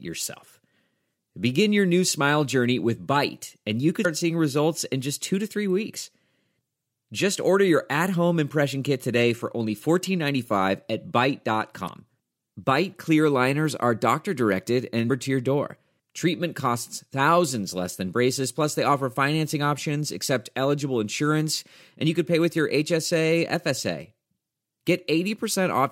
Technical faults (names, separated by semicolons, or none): damaged data in a compressed stream